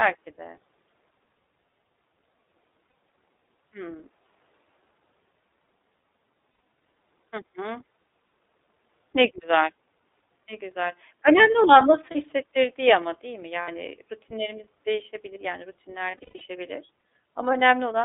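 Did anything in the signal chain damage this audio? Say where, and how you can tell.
Yes. At the codec stage, the whole clip has been through the iLBC codec. Nothing sits below about 300 Hz or above 3.7 kHz, and the speech has a plainly rough, synthetic edge. That fits iLBC's 30 ms frame, 13.33 kbps mode, where each frame's excitation is coded independently.

There are also lost iLBC frames from the network. Short held, buzzy patches appear at 2.87–2.93 s, 6.5–6.59 s, 12.12–12.15 s and 13.62–13.69 s. A longer cluster spans 16.11–16.42 s, with the longest gap around a tenth of a second. In each, the decoder repeats the last pitch cycle with noise, then recovers almost immediately.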